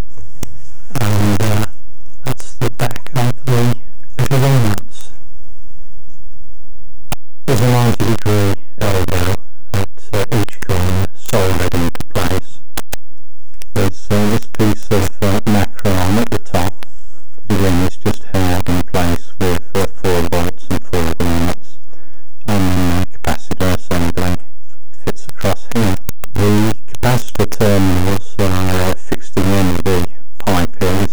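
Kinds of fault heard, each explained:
Stuck bit: throughout, harsh buzzy distortion and loud noise filling the pauses, likely a data bit stuck, throwing about half the samples off by roughly -10 dBFS steps.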